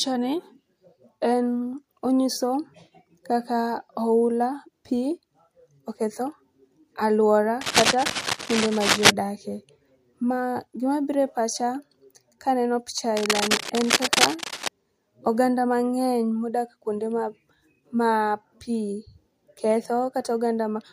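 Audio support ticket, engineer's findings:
Cable scratch noise, 7.61–9.11 s and 13.17–14.69 s (second after "kaneno picha"). Dense rustling bursts roughly as loud as the speech. Likely a worn cable or connector with shifting contact resistance.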